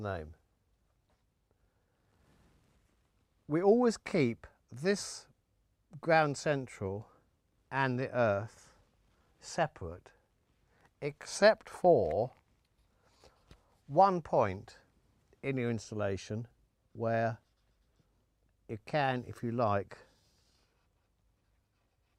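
No technical faults are audible.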